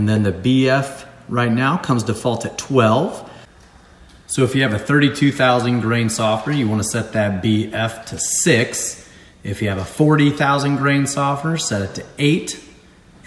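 No technical faults can be heard anywhere in the clip. The sound holds steady throughout, with nothing that points to a problem in how it was captured or delivered.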